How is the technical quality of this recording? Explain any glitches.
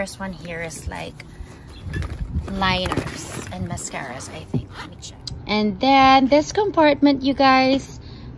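No glitches or technical faults can be heard here.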